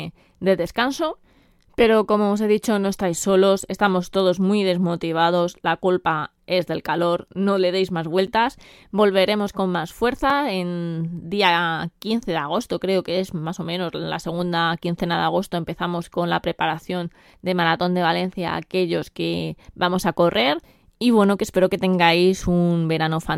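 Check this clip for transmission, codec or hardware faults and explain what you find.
Two brief dropouts interrupt the speech, both of the same kind.

Block of digital silence at 8.27 s and 10.30 s: for about 8.7 ms and then 2.9 ms, the signal is replaced by silence, most plausibly because the output buffer was not filled in time. The second gap fits a single missed 128-sample buffer. Because the audio stops and restarts abruptly with no fade, both events come across as quick ticks rather than audible holes.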